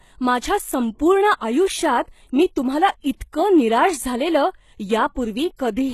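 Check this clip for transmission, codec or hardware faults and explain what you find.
Two faults are audible: a codec coloration across the whole speech clip, and one brief smear near the end.

The HE-AAC compression runs throughout. The treble is gritty and metallic, and sibilants sound lispy, which is likely spectral band replication: only the lower spectrum is coded, and the upper bands are rebuilt from copies of it under a coarse envelope. The plainly audible damage points to a low bitrate of around 16 kbps. On a spectrogram, energy stops sharply at 12.3 kHz, and the band above the crossover shows repeated, smeared patterns rather than true harmonics.

The pre-echo comes at 5.57 s and lasts about 19 ms. A sharp onset falls late in a transform block, so quantisation noise sized for the loud attack spreads back into the quiet moment before it. You hear a short hiss just ahead of the attack, and the attack itself sounds softened. 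On a waveform, low-level noise rises before the transient. On a spectrogram, it appears as a thin broadband smear leading the onset.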